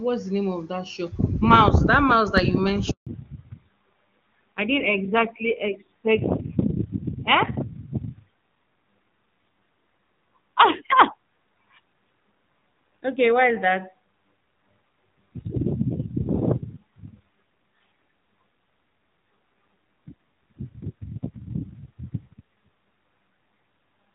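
A handover gap at about 2.91 s, right after "mouse that you", cuts this speech clip to silence for 160 ms, until 3.07 s: the call was being passed from one network to another, and no speech frames reached the receiver during the switch, so the voice drops away almost at once and whatever was said in that window is gone. Before the gap, the wideband codec at a rate that fits 23.85 kbit/s carries the voice clearly, with little or no coding damage. A fallback to narrowband follows from 3.07 s to the end of the clip: the new link negotiated a narrowband codec, the sound pointing to AMR-NB at 7.4 kbit/s, so all content above 4 kHz disappears. The voice loses its crisp consonants and air, turning duller, more muffled and rougher for the remainder.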